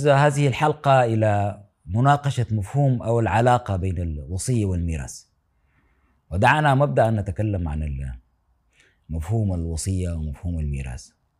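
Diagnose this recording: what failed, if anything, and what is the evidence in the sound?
Nothing failed here as far as I can hear; the speech comes through with no audible fault at any stage of the chain.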